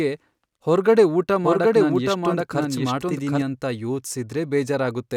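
A speech recording carries a doubled audio track from 1.44 s to 3.42 s. A second full-band copy runs roughly 0.7 s behind the original and a few decibels quieter, and it switches in and out abruptly at those times. What separates it from an echo or reverberation is that the copy has no decay, no repeats and no room colour. It is most likely caused by the signal being captured twice through a slower path.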